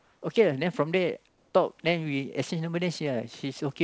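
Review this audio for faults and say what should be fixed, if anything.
Comfort noise in place of the background at 0.00–0.22 s and 1.28–1.54 s: the pauses become a steady, featureless hiss, about 2 and 5 dB quieter, likely from discontinuous transmission. A noise gate would leave silence instead. Disabling DTX on the sending side keeps the real background flowing through pauses.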